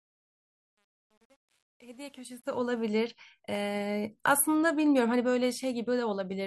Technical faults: truncation distortion on a fade

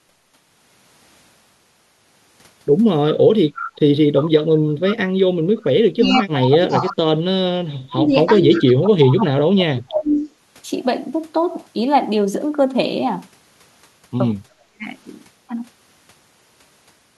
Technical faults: echo leak; speech suppressed in double talk

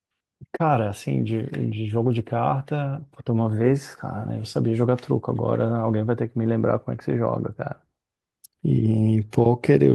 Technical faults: none

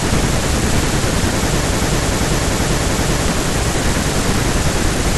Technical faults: broken-record loop

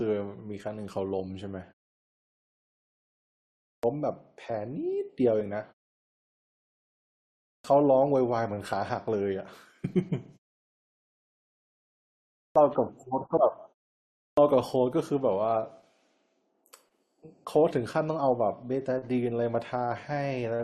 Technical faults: clipped start after a pause; damaged data in a compressed stream

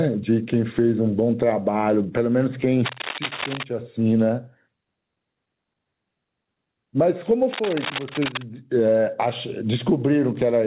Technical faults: gain pumping; cable scratch noise

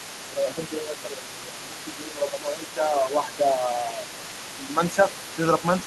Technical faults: other side's voice leaking through; speech suppressed in double talk

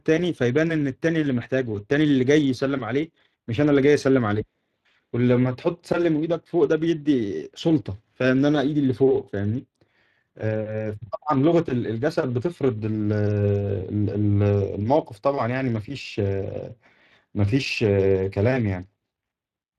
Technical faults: Speex codec

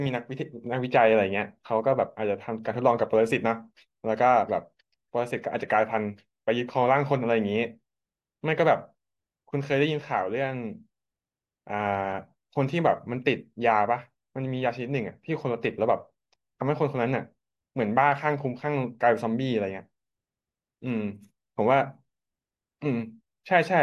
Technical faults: none

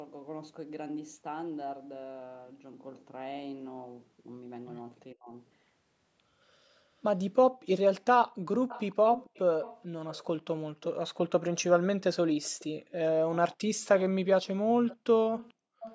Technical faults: speech suppressed in double talk; echo leak

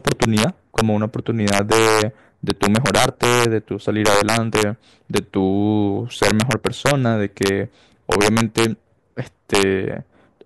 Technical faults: integer overflow

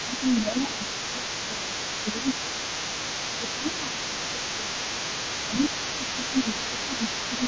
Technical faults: other side's voice leaking through; speech suppressed in double talk

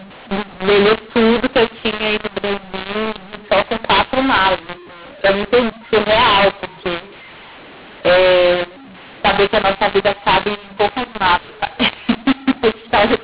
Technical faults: mu-law and A-law mixed up

